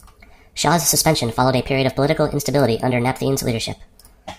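Throughout, the audio is played at the wrong sample rate, consistent with 32 kHz material run at 44.1 kHz, so speech runs 1.38 times fast and sits 5.55 semitones high.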